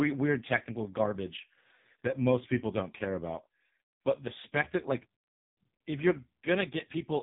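AMR narrowband mobile codec damage runs throughout the speech. The codec rebuilds the voice from a vocal-tract model excited by a handful of pulses per subframe, and here the coding is heavy: the voice comes out buzzy and synthetic, with a thin, processed edge, which fits one of the lowest AMR-NB modes at around 5 kbps. With 8 kHz sampling, nothing passes above 3.7 kHz, so the sound is dull and telephone-like.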